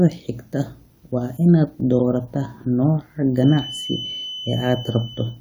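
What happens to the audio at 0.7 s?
Nothing goes wrong at 0.7 s; the speech there is intact, with no dropout, click, distortion or other fault.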